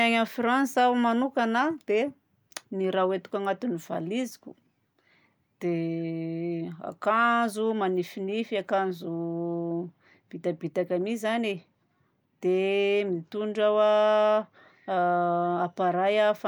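No technical faults can be heard anywhere in the speech recording; the signal stays steady and intact throughout.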